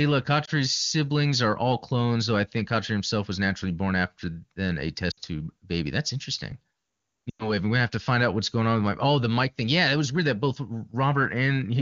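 Radio errors corrupted AMR speech frames, and the AMR-WB decoder, running cleanly at 23.85 kbit/s, covered each gap by repeating its last good pitch and vocal tract settings at falling gain. The result is lost AMR speech frames. At 0.45–0.50 s, before "siblings are all clones", a 20 ms loss, about one frame, makes a brief dip. From 5.11 to 5.20 s, between "born after then a" and "tube baby", and from 7.30 to 7.50 s, before "gonna have to find", losses of 60 and 100 ms drop the sound to near silence within two frames.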